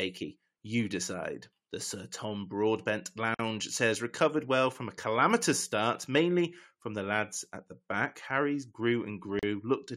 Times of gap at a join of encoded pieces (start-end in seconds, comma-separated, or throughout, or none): 3.34-3.39, 9.39-9.43